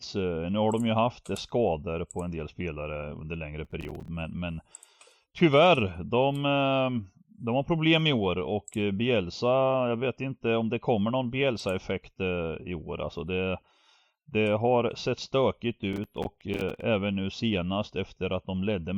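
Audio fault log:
3.65–4.08 s, processor overload crackle: After "del spelare under längre" and before "men men", the speech breaks into a gritty crackle. Processing deadlines are being missed in quick succession, and each miss drops in a short silent gap with hard edges. The pattern fits buffers of roughly 5 ms.
15.93–16.83 s, processor overload crackle: Between "sett stökigt" and "nu senast", a longer burst of the same silent micro-gaps produces a tearing texture. It stops once the processing load eases.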